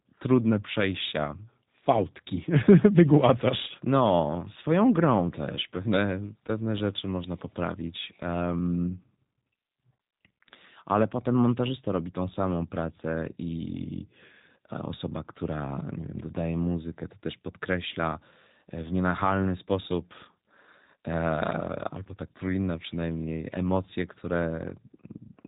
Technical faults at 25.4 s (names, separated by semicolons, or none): G.729 codec